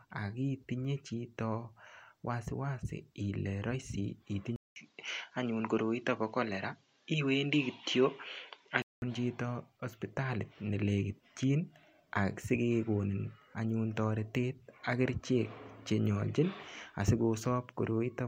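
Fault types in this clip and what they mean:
Input switched to a poorer device: the input likely changed to a narrower-band device, so the sound turns dull, with nothing above 7.6 kHz, after a 200 ms gap.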